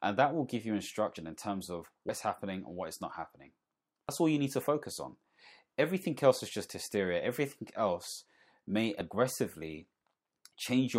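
At 2.09 s and 4.09 s the speech jumps ahead, losing roughly a tenth and a twentieth of a second, likely dropped buffers (overrun).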